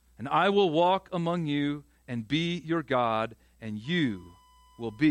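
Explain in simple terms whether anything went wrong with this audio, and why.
USB whine from 3.84 s to the end: a steady 1 kHz tone, caused by the USB connection drawing power in 1-millisecond bursts that leak into the recording.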